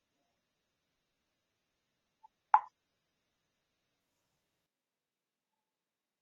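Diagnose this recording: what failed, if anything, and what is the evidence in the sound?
Adaptive stream starting at a low bitrate, at the codec and network stage: until 4.0 s nothing sounds above 5.8 kHz, then the treble returns abruptly without a gap, fitting a step from 24 to 96 kbit/s.

Switch to a distant microphone, likely at the capture stage: from 4.66 s to the end the sound turns roomy and hollow, about 10 dB quieter, with room noise around 35 dB below. A simple gain drop wouldn't add reverberation.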